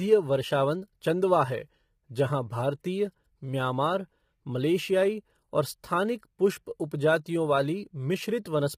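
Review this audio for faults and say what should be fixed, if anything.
The speech sounds rough and grainy the whole way through, with hiss filling the gaps between harmonics and a thin, synthetic-sounding top band. That's likely low-delay AAC compression. AAC-ELD's short frames blur pitch detail, and damage this heavy fits a bitrate around 24 kbps. To prevent it, give the encoder more bitrate, or switch to a longer-frame codec when latency allows.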